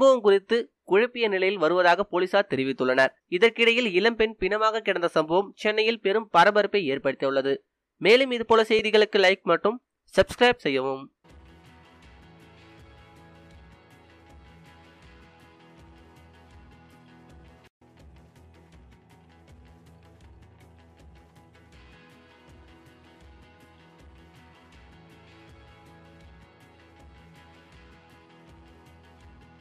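At 8.79 s the sound briefly freezes for about 1.1 ms, the waveform holding flat before resuming with only a soft edge. This is an underrun with held sample: the output buffer emptied, the converter kept its last value, and playback continued without losing audio.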